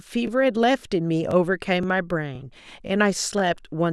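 Speech, cut into overlapping chunks of half a second, each restarting 20 ms early, so a brief repeat stutters at 0.27, 0.79, 1.31, 1.83, 2.35, 2.87 and 3.39 s.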